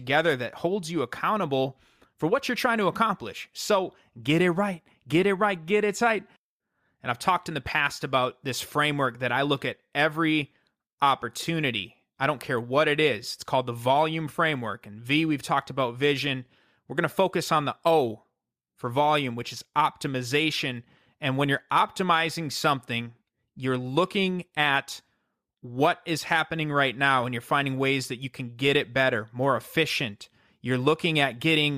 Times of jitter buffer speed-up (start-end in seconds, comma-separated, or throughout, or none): none